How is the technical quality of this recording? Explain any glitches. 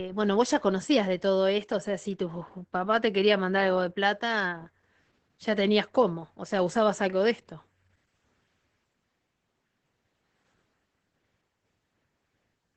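The quality is limited by one fault that lasts the whole recording. Opus voice compression, throughout: the SILK linear-prediction coder keeps the band to about 8 kHz and codes the excitation coarsely, which fits a bitrate near 12 kbps. The speech sounds plainly dull, hoarse and faintly robotic.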